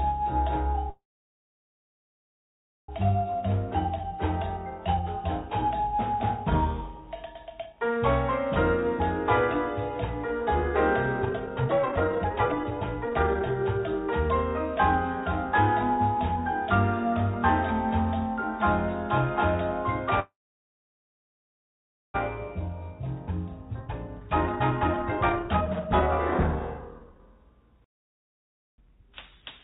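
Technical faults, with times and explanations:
0.90–2.90 s and 20.20–22.16 s, call audio freeze: packet delivery likely stalled and the jitter buffer drained, so the receiver stretched the last sound into a brief fading tail, then almost 1.9 s and 1.8 s of silence. The audio resumes where it stopped, adding about 2 s of delay with nothing lost.
3.42–8.89 s, 10.41–14.30 s and 22.59–29.60 s, jitter buffer speed-up: after each backlog the buffer held too much audio, so the receiver cut many short pitch-period slices to catch up. Playback runs at 106%, 139% and 128% at unchanged pitch, dropping roughly 0.4 s, 1.5 s and 2 s and sounding rushed.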